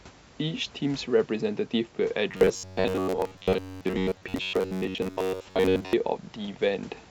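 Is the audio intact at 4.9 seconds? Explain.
No. At 4.9 s you're inside a stretch of robotic sound from repeated short buffers, running from 2.31 to 5.93 s. New audio is likely arriving too seldom, so about 10.7 ms gets replayed for most of that span, clamping a rigid, metallic 93.8 Hz buzz onto the speech.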